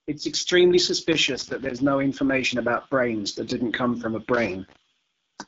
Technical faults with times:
0.00-5.47 AMR wideband (HD Voice) codec
1.12-1.81 loose connector crackle
4.34-4.76 loose connector crackle

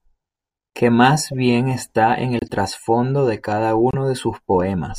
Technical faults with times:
1.31-1.34 corrupt frame decoded
2.37-2.51 corrupt frame decoded
3.91-3.95 corrupt frame decoded

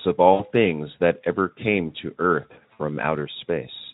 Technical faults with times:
0.33-0.47 VoIP packet loss concealed by the speech codec
2.73-2.82 VoIP packet loss concealed by the speech codec

